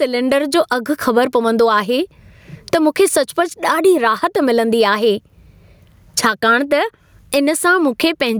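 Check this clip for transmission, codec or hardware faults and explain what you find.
Gain pumping runs through the whole speech clip. The input gain is likely set far too high, so a fast limiter pulls the level down on each loud syllable, swinging it by around 20 dB. Loud and soft parts end up closer in level, leaving a squashed sound.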